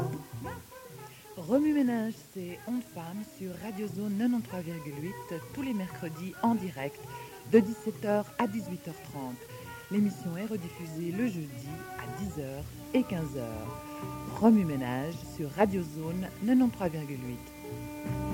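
From start to finish, the sound sits on a constant, even hiss. This is low bit depth with dither. Only 8 bits carry the signal. Dither randomises the rounding error, turning it into steady white noise roughly 25 dB below the signal, with no distortion.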